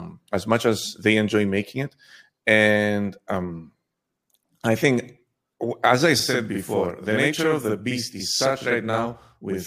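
From 6.2 s to the end, a channel delay (doubling) appears. One channel runs 46.4 ms late, which fits a 2048-sample buffer, and the mono sum carries a same-level slap echo. The waveform shows every onset doubled.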